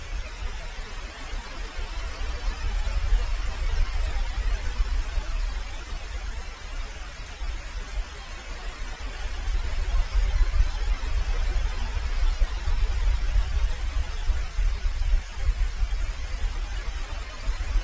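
Nothing's wrong with this one: it's everyday sound that has come through a call connection, and the top end stops at 8 kHz just as you'd expect from a wideband call codec like G.722, with no faults to point to.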